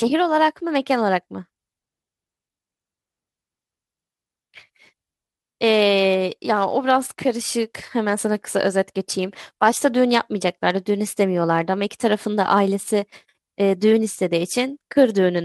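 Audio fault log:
No faults heard anywhere in this speech recording.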